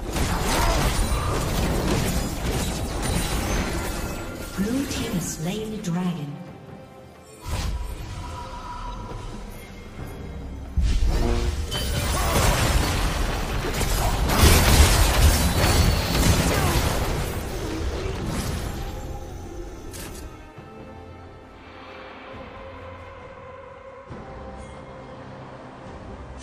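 At 23.13 s the sound suddenly gets duller and stays that way to the end at 26.43 s. That's an adaptive stream at a lower bitrate: the player switched mid-stream to a cheaper encode, with no gap. Everything above about 9.8 kHz is gone, and the swirly codec artefacts step up. The character fits AAC dropping from around 96 kbit/s to around 32 kbit/s, likely because the connection slowed.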